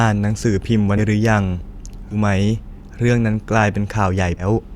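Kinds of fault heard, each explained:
Compressed frames skipped: whole 20 ms frames drop out three times, so the speech jumps ahead roughly 150 to 300 ms; the spectrogram shows abrupt joins.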